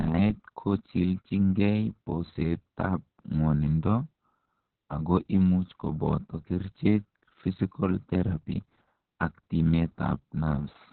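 From start to end, the speech carries heavy Opus voice compression: nothing above about 4.4 kHz, leaving it muffled, hoarse and faintly robotic, which fits SILK narrowband coding near 6 kbps. Unlike a simple low-pass, the coarse excitation adds a buzzy, synthetic roughness.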